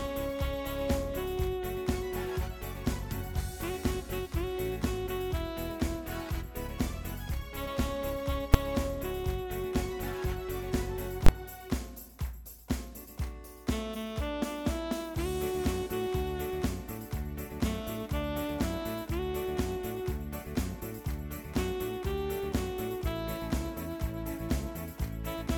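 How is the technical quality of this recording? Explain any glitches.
The recording has two brief failures where the signal is forced to full scale. At 8.54 s and again from 11.26 to 11.29 s, invalid numbers at full scale occur: a calculation produced infinite or undefined values that were clamped to the maximum sample value. The first is a single sharp bang, which fits a roughly 5 ms block of about 256 samples. The second gives a loud pop at each edge with silence between, which fits a 21 ms block of about 1024 samples. In the waveform each appears as a flat rectangle far beyond the audio's peaks. A spectrogram shows bright vertical broadband lines at the block edges.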